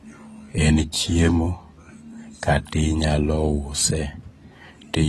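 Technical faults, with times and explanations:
Throughout, AAC compression: audio stops at 12.1 kHz and sounds dull, smeared and warbling, likely from AAC-LC coding at a low bitrate that fits roughly 32 kbps.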